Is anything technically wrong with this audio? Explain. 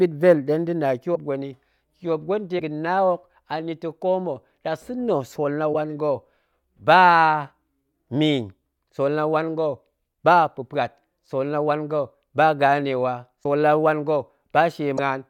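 Yes, there are five short dropouts. At 1.14–1.17, 2.58–2.61, 5.73–5.75, 13.43–13.45 and 14.97–14.99 s the speech skips forward with a garbled glitch lasting about one 24 ms frame. The likely cause is a broken MP3 bit reservoir: a frame was lost, and the next one decoded using borrowed bytes that belonged to another frame.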